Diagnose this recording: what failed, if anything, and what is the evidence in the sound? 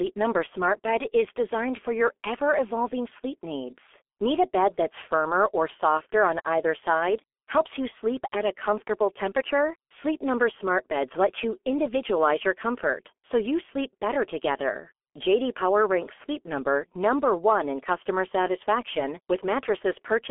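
The failure is at the codec stage: the speech has passed through G.723.1 at heavy damage, throughout the clip. Nothing survives above 3.6 kHz, and the band sits at a narrow 300 Hz to 3.4 kHz. The result is muffled, hoarse and smeared on consonants, which fits a roughly 6 kbit/s stream.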